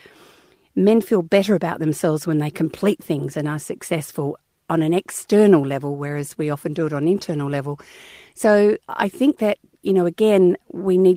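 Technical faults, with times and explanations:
0.99 s, lost packet rebuilt from error correction: one 20 ms packet was lost, and the decoder filled it from the low-bitrate copy in the next packet. There is no gap, just a brief rougher, noisier moment, seen as a thin grainy strip on a spectrogram in an unbroken waveform.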